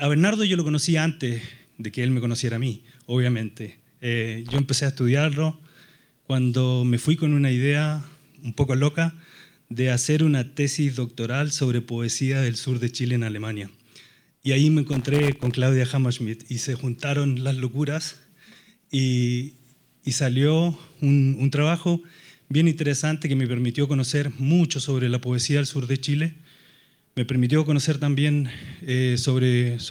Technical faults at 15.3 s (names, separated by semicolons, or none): loose connector crackle